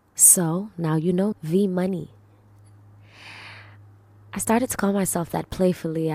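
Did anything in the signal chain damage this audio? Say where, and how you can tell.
Yes: a CD skip at playback, where the laser jumped tracks. At 1.32 s a very brief mute and tick cut the speech, which resumes from another point on the disc.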